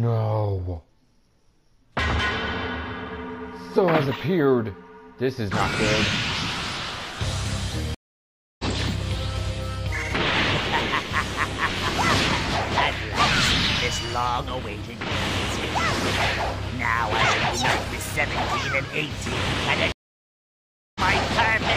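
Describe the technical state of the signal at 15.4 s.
At 15.4 s the signal is intact, with no audible technical fault at that point.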